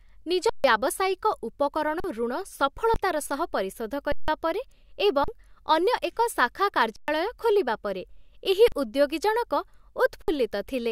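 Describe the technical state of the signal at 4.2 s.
At 4.2 s the speech is inside an underrun with held sample, from 4.12 to 4.28 s, just after "ସହ ପରିଶୋଧ". The buffer ran dry and the converter held its last value. The sound stops flat for 160 ms. About 150 ms is lost.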